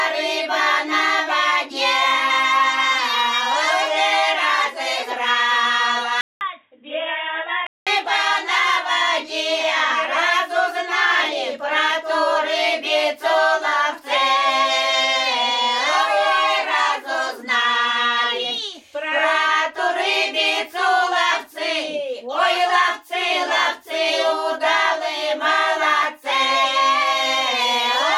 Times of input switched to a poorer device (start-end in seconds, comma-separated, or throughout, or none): 6.21-7.87